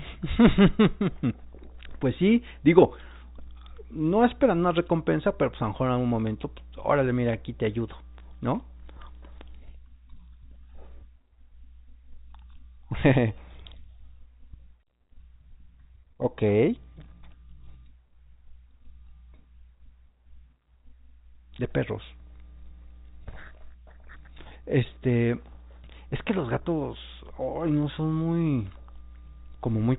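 No technical faults are audible.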